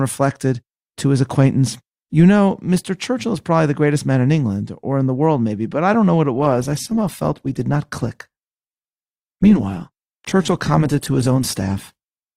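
From 6.34 s, speech suddenly shows more codec artefacts without a gap. This is an adaptive stream at a lower bitrate, fitting Opus near 16 kbit/s.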